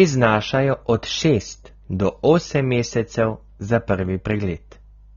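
AAC compression damage runs through the whole of this speech clip: the sound is dull and smeared, with a warbling, fizzy texture on sustained sounds and sibilants, and nothing above 18.4 kHz. The likely cause is AAC-LC coding at a low bitrate, which fits about 24 kbps, leaving spectral holes or substitute noise.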